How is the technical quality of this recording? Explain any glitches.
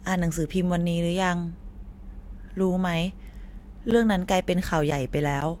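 The speech is marred by periodic USB or driver dropouts. From 3.91 to 5.42 s, roughly four brief silent gaps of about 10 ms arrive every 0.5 s as the driver stalls, ticking only during sound. Their strict regularity rules out random network packet loss.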